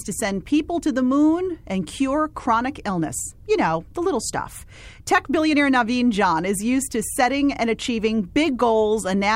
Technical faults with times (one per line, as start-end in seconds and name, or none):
none